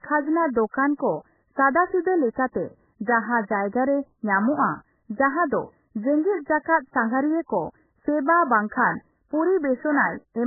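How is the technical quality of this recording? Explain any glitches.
Technical quality is poor. The speech is heavily band-limited and smeared throughout, with one brief pre-echo artefact.

Throughout, nothing is heard above 2.1 kHz. The sound is dull, watery and swirly. This likely comes from heavy MP3 compression at a very low bitrate, around 8 kbps. With so few bits, the encoder cuts the treble and drops weak frequency lines from frame to frame.

From 2.33 to 2.37 s there is pre-echo. A short hiss runs about 37 ms ahead of a sharp onset, and the attack sounds softened. The codec spreads its noise across a whole block, so the noise leaks into the quiet moment before the attack.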